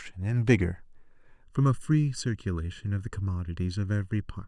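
From 1.44 s to the end at 4.47 s, one channel runs late by under a millisecond and the two are summed, causing channel delay (comb filtering). Notches fall at regular intervals from around 700 Hz upward, leaving the speech hollow and phasey.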